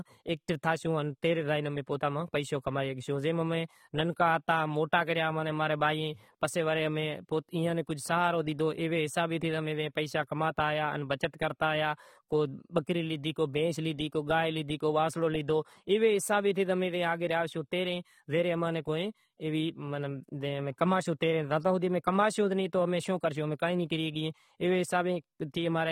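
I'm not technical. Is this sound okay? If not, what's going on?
No. The audio was most likely squeezed hard by AAC compression, which throws away detail to make the file small. Throughout the speech this leaves it dull, with nothing above about 16.9 kHz, and gives hiss-like sounds a smeared, fizzy, warbling texture.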